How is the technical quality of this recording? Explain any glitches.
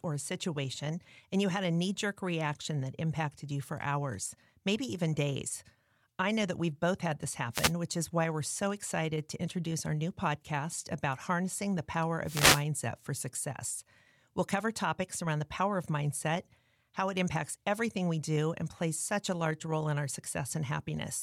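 Two brief bursts of static break into the speech, each a wireless microphone noise hit. The first runs from 7.52 to 7.73 s, between "we've both had this" and "which is why we're"; the second, longer at 0.4 s, spans 12.24 to 12.65 s, between "harnessing the power" and "for success". Both sound like a quick hissy swish over the voice. They come from the mic's FM radio signal briefly fading as reflected paths cancel, letting receiver noise surge up.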